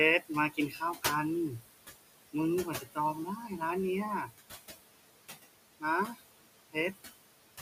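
Noise suppressor artifacts run through the whole clip. The suppressor pulls the steady room noise, sitting about 10 dB under the speech, down by about 19 dB between phrases. It lets the noise back up under each phrase.

Speech cut by the noise suppressor comes in four places. From 0.5 to 1.05 s, about 300 ms of speech drops by up to about 16 dB. From 2.65 to 2.98 s, the drop reaches about 11 dB. From 3.37 to 3.61 s, it is about 8 dB. From 6.06 to 6.21 s, it is about 16 dB again. In each case the suppressor treats soft speech as noise. Those parts sound swallowed.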